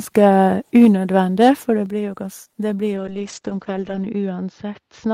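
At 0.75 to 0.85 s the speech turns harsh and crackly. Peaks run about 2 dB past the converter's limit, and their tops are flattened. This is likely microphone overload, with the input set too hot for the converter.

Right at 0.85 s the level falls suddenly by about 3 dB, voice and background together. This is likely the microphone volume stepped down by the call software after that distorted peak.

From 1.41 to 1.49 s, just before "for det", the same crackle returns. This time the peaks are about 3 dB over. It is likely microphone overload again, with a small share of the waveform clipped.

At 1.86 s, just after "for det", the level drops once more, now by about 5 dB. Again it is likely the microphone volume stepped down in a single jump, reacting to the clipping.

From 2.97 s to the end, a call bitrate drop makes the speech rough and muffled. The top end shrinks from about 20 kHz to 8 kHz. 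The coarsest stretch lasts about 1.1 s. This fits the encoder falling from about 32 to 12 kbps.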